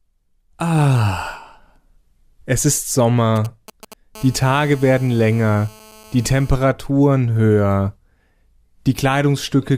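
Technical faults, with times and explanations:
3.36–4.17 s, GSM signalling bursts: A nearby 2G phone is exchanging short groups of radio bursts with the network while setting up, and the audio circuit rectifies that radio energy into the signal path. Because the bursts arrive in brief clusters at about 217 per second, the sound picks up a galloping dit-dit-dit of short rasping 217 Hz buzzes, sitting roughly 20 dB below the speech and unrelated to it.
4.17–6.52 s, GSM phone buzz: The same phone is now in a call and transmits continuously in bursts at about 217 per second. The audio circuit rectifies each radio pulse, so the bursts become a train of sharp-edged clicks that merge into a steady, hard, raspy 217 Hz buzz rich in harmonics. It runs unbroken under the speech at about 26 dB below it until it stops at 6.52 s.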